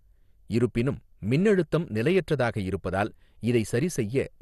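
Throughout, the speech sounds dull and gurgling, with nothing above 12.2 kHz. This is likely MP2 compression at a low rate, switching off upper sub-bands and coarsely quantising the rest.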